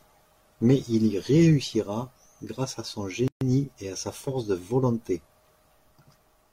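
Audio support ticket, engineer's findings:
Speech clip. Gap at a join of encoded pieces, 3.28 to 3.41 s. About 134 ms gap opens between "réussira grâce à son" and "et à sa force". Edges smeared. Sound resumes where it stopped. Probable component: segment concatenation. Separately encoded pieces joined untrimmed. Encoder start delay and last-frame padding left in. Pieces appear to be 4 s long.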